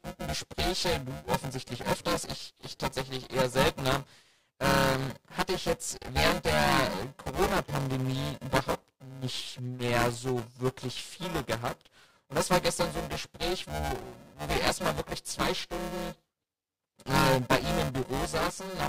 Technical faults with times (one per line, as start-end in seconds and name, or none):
0.00-18.89 buffer tearing